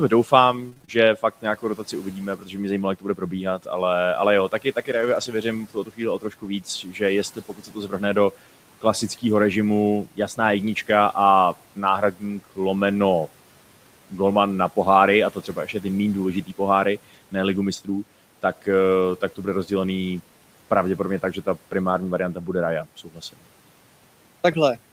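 The noise suppressor misjudges parts of the speech as background from 0.1 to 3.67 s, cutting it by up to about 13 dB over well under a second in total, so soft consonants and word endings sound swallowed. Inside that stretch, from 0.69 to 0.89 s, repeated packet loss strikes. A run of short holes, none longer than 22 ms, is patched by stretching the preceding sound, and half the span ends up concealed. The result is choppy sound with small pieces missing.

From 4.49 to 9.23 s the suppressor again pulls speech down, by up to about 12 dB over roughly a second. Between 4.93 and 5.27 s, lost packets are rebuilt from error correction. The decoder plays the low-bitrate copies carried in the following packets, so 180 ms comes through without a gap but sounds rougher and grainier.

Further suppressor cuts fall at 11.55–12.58 s (about 12 dB), 15.33–15.84 s (about 10 dB) and 22.34–23.39 s (about 13 dB), each briefly fading quiet speech toward the room noise, which sits about 23 dB below the voice. 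Shorter error-correction rebuilds occur at 19.01–19.03 s and 21.91–21.97 s, each a momentary roughening with no dropout.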